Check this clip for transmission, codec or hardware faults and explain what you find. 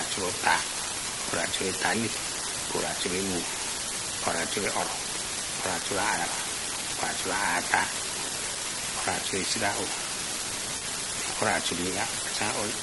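Three faults are audible in this speech clip: a constant crackle, a rough coded texture throughout, and one brief smeared patch near the end.

Unreliable data bit: a steady fizzing crackle runs from start to finish and carries on through the pauses, where nothing else masks it. The clicks all seem the same size. That pattern fits a marginal data line in the converter or interface, whose bit comes out wrong in a random share of samples. Each wrong bit adds an identical spike, and scattered spikes add up to that even crackle.

Low-delay AAC compression: the voice sounds grainy and rough all the way through. Noise fills the gaps between the harmonics, and the top band has a thin, synthetic quality. The likely cause is AAC-ELD, the low-delay codec used for video calls. Its very short frames cannot resolve voice harmonics finely, and the damage is plainly audible here, which points to a modest bitrate of about 32 kbps.

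AAC frame loss with concealment: from 10.77 to 10.83 s there is a brief smeared, noisy blur where the speech loses definition. The decoder was missing data there, which points to a couple of lost frames, roughly 40 ms of audio. It filled the gap by reusing the last good spectrum with altered detail. The gap was too short for the fill to fade out, so it is heard as a smudge rather than a dropout.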